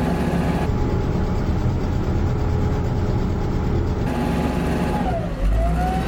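From 0.66 to 4.06 s there's a stereo read as mono fault: the interleaved left and right samples get played back-to-back as one channel, so the sound drops to half speed and a full octave lower, with a faint mirrored copy up in the top half of the spectrum.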